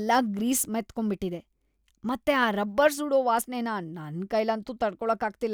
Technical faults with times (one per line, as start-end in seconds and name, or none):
0.00-2.88 block size mismatch (truncated)